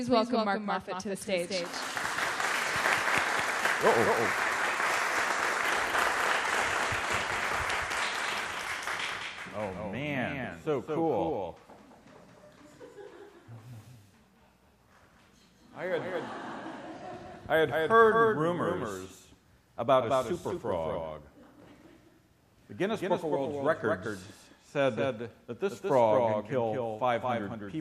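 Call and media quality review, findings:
Doubled audio track, whole clip: likely a second, slower capture path mixed in. Full-band copy trails about 200 ms behind, roughly 5 dB down, no decay.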